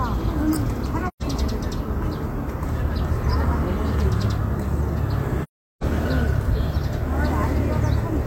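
At 1.08 s, and again from 5.43 to 5.83 s, AAC frame loss with muting occurs: compressed frames never reached the decoder, so it replaced their spectrum with zeros. The first gap, about 128 ms, fits three lost frames; the second, about 384 ms, fits nine. Because the overlapping transform windows taper into and out of the silence, each dropout fades away and returns smoothly, a soft-edged hole.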